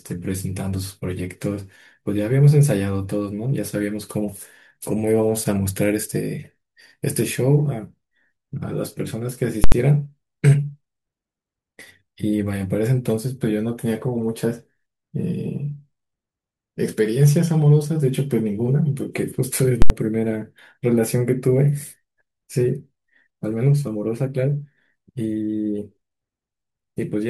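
A calculation produced invalid numbers at full scale, pinning the output to its extreme value for 80 ms at 9.64 s and 19.82 s, each heard as one loud bang.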